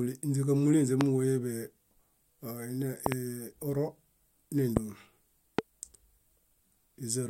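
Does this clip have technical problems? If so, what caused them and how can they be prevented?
Yes: loud pops, sharp thumps around 20 dB above the speech, at 1.01–1.03, 3.06–3.14 (a double pop), 4.77–4.79 and 5.59–5.61 s, likely voltage spikes from connector, switch or static discharges. Secure cables, avoid switching during recording, and ground equipment properly.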